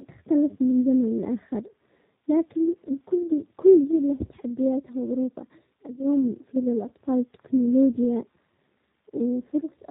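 From start to finish the speech carries G.729 codec damage, the rough, slightly synthetic grain of a low-rate VoIP coder whose character fits 8 kbit/s. Each 10 ms frame is rebuilt from a vocal tract filter, a pitch predictor and a few pulses, so voicing sounds synthetic and thin, and nothing above 4 kHz survives. On a spectrogram the energy stops dead at a flat 4 kHz ceiling, and the harmonics look smeared and blocky.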